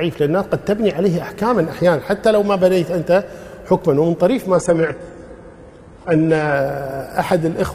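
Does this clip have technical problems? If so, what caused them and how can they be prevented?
Yes. From 4.54 to 6.54 s the sound suddenly turns duller, with nothing above 11.5 kHz and stronger codec artefacts, then snaps back with no gap at either edge. This is an adaptive stream at a lower bitrate: the player briefly switched to a much leaner encoding, one whose sound suggests a low-rate HE-AAC-style stream, because the connection slowed. Giving the player more buffer headroom or a steadier connection prevents such downshifts.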